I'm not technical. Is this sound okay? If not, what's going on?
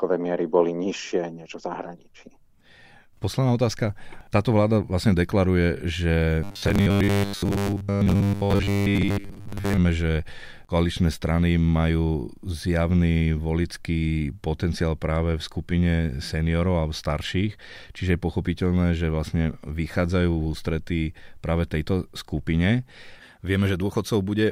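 No. From 6.44 to 9.78 s, just before "že koaličné strany majú", there's robotic sound from repeated short buffers: a metallic 100 Hz buzz, likely because audio arrived late and most of it was replaced by 10 ms repeats. Unlike a dropout, the sound never goes silent.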